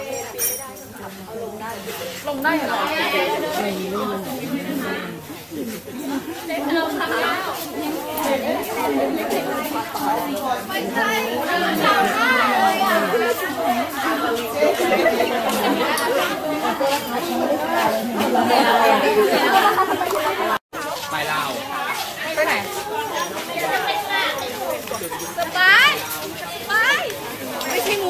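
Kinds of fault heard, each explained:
No faults detected on this pass; nothing to itemise.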